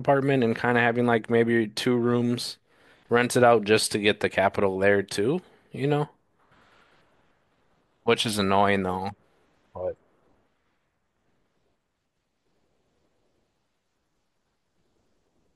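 No audible technical faults occur anywhere in this recording.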